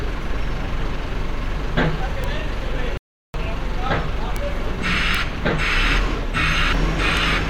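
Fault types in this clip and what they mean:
Compressed frames skipped: At 2.04, 4.68 and 6.72 s the audio jumps forward, losing roughly a tenth of a second at the first and last points and nearer 150 ms at the middle one. That fits several whole codec frames going missing or being rejected by the decoder. A spectrogram shows an abrupt content discontinuity.
Bit error spike: Single sharp ticks occur at 2.24, 4.36, 5.15 and 7.17 s. Each is a flipped bit that throws one to three samples far from their true value before they snap back. They bear no relation to the surrounding sound. On the waveform each is a lone needle jutting out of the trace. On a spectrogram it is a thin full-height vertical line spanning all frequencies.
Playback stall: From 2.97 to 3.34 s the sound cuts out mid-flow into silence for about 0.37 s, then resumes. This is likely the player starving for data or having its thread blocked until it could deliver output again. 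The waveform shows a flat silent stretch with abrupt edges. The spectrogram shows a clean empty column across every frequency for that span.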